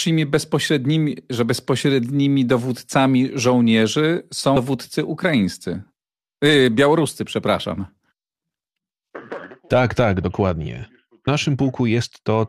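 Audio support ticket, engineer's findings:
Damaged data in a compressed stream: two brief glitches at 4.55 s and 11.26 s. Decoder misreads corrupted frames and loses sync until the next header. Spectrogram: thin broadband vertical streaks. Waveform: abrupt discontinuity in the speech.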